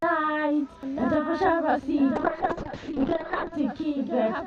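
From 2.16 s to 3.59 s there is a call bitrate drop: the encoder was starved of bits and coded the sound far more coarsely for about 1.36 s. The sound turns rough and watery, and muffled where the top end vanishes. On a spectrogram the content above 8 kHz, previously reaching 20 kHz, disappears, with smeared, blocky texture below. The degradation fits a fall from around 128 kbps to 6 kbps.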